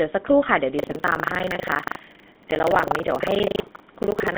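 A speech recording with a buzzy, gravelly roughness throughout and a hard band limit, with nothing above 4 kHz and the useful band sitting between about 200 Hz and 3.6 kHz. That pairing of a telephone-width band with rasping, pulse-driven texture is the signature of the GSM full-rate codec, and the plainly audible damage fits its 13 kbps rate. The codec rebuilds the voice from a vocal-tract model excited by sparse, evenly spaced pulses, which is where the grit comes from. From 0.76 s to the end, a steady robotic rattle at 25 Hz rides on the speech whenever sound is present. This is buffer tearing. The write and read positions of a ring buffer have drifted until they cross inside every 40 ms period, so roughly a third of each period is stale audio from around 150 ms earlier, spliced in with abrupt joins on both sides.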